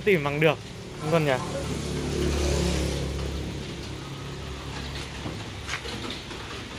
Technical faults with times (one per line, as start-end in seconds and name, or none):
0.00-6.79 resampler restarted on every block